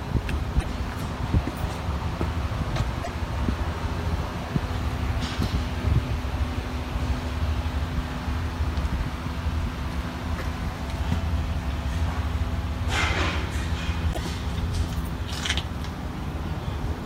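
At 0.59, 3.02 and 14.12 s the audio skips forward and each jump brings a short glitch lasting about 56 to 69 ms, roughly two to three MP3 frames of 26.1 ms. This is likely a broken MP3 bit reservoir: frames were lost, so the frames that followed reached back for data and decoded bytes belonging to other frames. Unlike a plain dropout, the material resumes further ahead.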